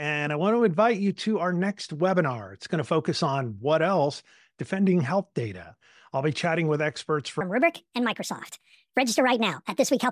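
From 7.41 s to the end at 10.11 s, the speech turns into a wrong sample rate fault. The samples are played faster than they were captured, with no rate conversion. Speed and pitch rise together. The speech runs about 1.45 times too fast and sits about 6.45 semitones higher. That ratio fits audio recorded at 22 kHz but played at 32 kHz. Voices sound squeaky, clipped short and hurried.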